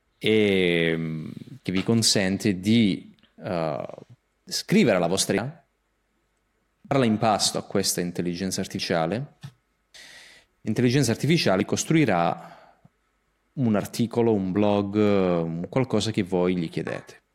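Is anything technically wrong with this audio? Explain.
Yes. The speech has four abrupt skips, likely dropped buffers (overrun). At 5.38 s, just after "scrivere la vostra", roughly a third of a second vanishes. Shorter jumps of about a tenth of a second follow at 6.91 s, before "in pasto a questa", at 8.79 s, after "pasto a questa intelligenza", and at 11.61 s. Samples were overwritten before being read, so the two sides join directly. Each is a sudden jump, with no silence.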